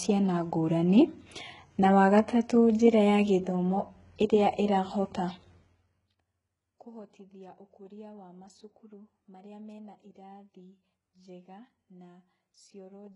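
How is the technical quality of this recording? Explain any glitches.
Technical quality is poor throughout this speech clip because of heavy HE-AAC compression. The encoder likely coded only the lower spectrum at a very low bitrate, consistent with roughly 12 kbps, and rebuilt the treble by copying lower bands upward under a coarse envelope. Nothing reaches above 11.1 kHz, and the synthetic treble doesn't match the real harmonics, so sibilants turn gritty, metallic and lispy while the top end sounds artificial.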